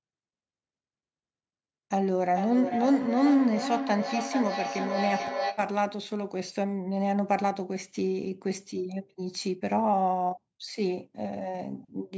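From 2.34 to 5.79 s there is feedback echo between two devices. Two devices in the same room share the call. One plays back what the other's microphone sent, and that microphone picks it up again. Each device's echo canceller removes only its own playback, so the loop survives. The speech returns at a fixed gap of roughly 0.4 seconds, sounding thin and ringing. The strongest repeat sits about 5 dB below the direct speech.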